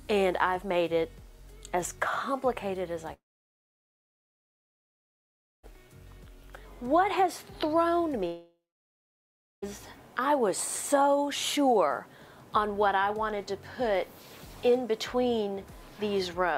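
Incoming audio stops twice, from 3.13 to 5.65 s and from 8.27 to 9.64 s, likely a long network dropout. The receiver briefly stretches the last sound into a fading buzz or hiss, then leaves about 2.4 s and 1.1 s of silence. Playback resumes with those stretches lost.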